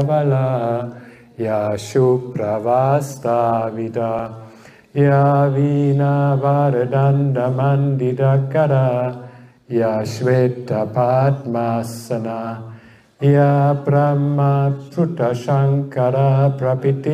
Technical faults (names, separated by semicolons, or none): dropped buffer (overrun)